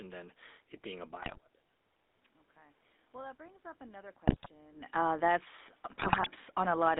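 The whole clip carries the buzzy, gravelly roughness of the GSM full-rate codec, consistent with the 13 kbps coder, with the line band squeezed to roughly 250 Hz to 3.7 kHz. GSM bit errors first hit from 1.22 to 1.38 s: corrupted filter, pitch and gain values make the speech squawk and gargle for eight frames. That comes just after the talker moves around 1 s, which is natural and not a system fault. From 2.53 to 5.72 s the automatic gain control is rising, slowly lifting voice and background together by about 4 dB as it chases an input that dropped about 22 dB. More GSM bit errors break through from 4.27 to 4.48 s, near a second natural talker shift around 4.5 s, and again, longer, from 5.90 to 6.28 s with sustained popping and gargling.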